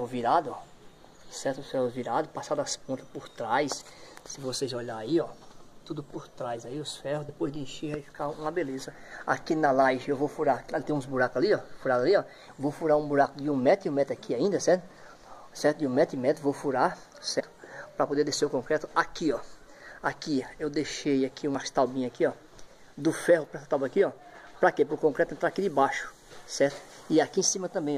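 At 7.28 s, 17.39 to 17.41 s, 21.54 s and 27.37 s the audio jumps forward where compressed frames were skipped, dropped as missing or rejected by the decoder. Each join is a short smeared blip rather than a click, because adjacent frames overlap. The gaps at 7.28, 21.54 and 27.37 s lose about 30 ms, which fits one 26.1 ms frame. The 17.39 s jump loses around 150 ms, pointing to roughly five frames.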